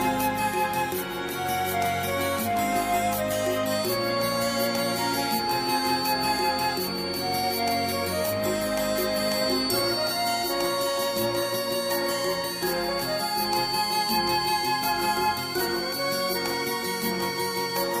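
The loudspeaker-to-microphone loop was likely sitting right at the edge of feedback, where one high frequency keeps ringing at a low level without building into a howl. From 3.60 s to the end, a feedback whistle results: a thin, sustained tone at 4.5 kHz runs behind the sound, about 10 dB below it, swelling and fading slowly in level as the loop gain drifts.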